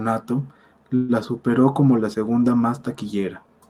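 At 0.95 s a call audio freeze starts. The last sound is held on as a fading tail for 135 ms. Packets were likely delayed, emptying the jitter buffer. From 1.12 s the speech continues where it stopped, with nothing lost but 135 ms later.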